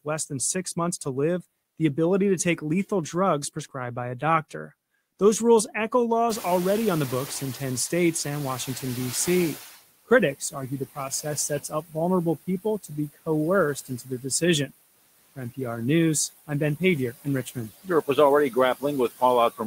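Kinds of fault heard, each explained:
Noise suppressor artifacts: The suppressor pulls down whatever bands it judges to be steady noise, frame by frame, by about 16 dB here, so the background dips between phrases and swells back under the speech.
Noise suppressor catching up: Right after "rules echo", around 6.5 s, the room noise jumps by about 21 dB, and the suppressor's noise estimate trails behind. From 6.29 to 9.75 s the extra noise leaks through, then settles as the estimate adapts over about 3.5 s.
Speech cut by the noise suppressor: The suppressor mistakes bits of the speech for noise and ducks them with the background, by up to about 19 dB. Between 10.08 and 14.71 s roughly 0.7 s of soft sounds gets swallowed, and it happens again from 16.47 s to the end.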